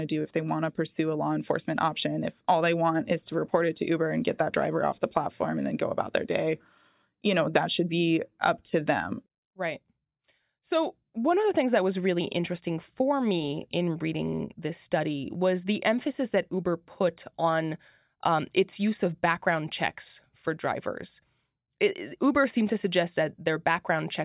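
No technical faults can be heard in this recording.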